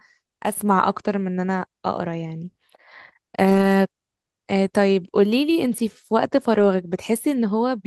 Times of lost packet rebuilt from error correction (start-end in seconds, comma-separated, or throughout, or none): 3.49-3.63, 6.53-6.59